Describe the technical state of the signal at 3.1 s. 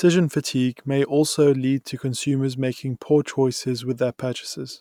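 At 3.1 s the speech signal is intact, with no audible technical fault at that moment.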